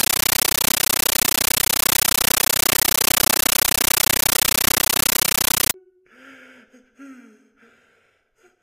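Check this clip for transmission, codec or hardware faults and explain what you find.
One fault is present. From 0.0 to 5.74 s, a compressed stream played as audio: undecoded data, likely AC-3, is read as samples. This gives loud chattering static, with 13.3 ms full-band noise bursts separated by silent gaps and repeating 31.25 times a second.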